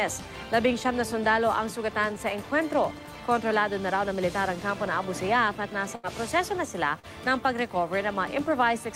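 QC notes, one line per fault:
5.95 to 6.05 s, burst of packet loss. Roughly 80 ms of audio never arrived in time to play. The receiver kept extending the last sound and faded it down across the hole, giving a held buzz or dying hiss. Playback then picks up later, with that stretch skipped.
6.99 to 7.05 s, short concealed packet loss. About 40 ms went missing before decoding. The decoder patched it by continuing the preceding sound, then crossfaded back into real audio. The result is a brief smear or wobble, and a short consonant may disappear.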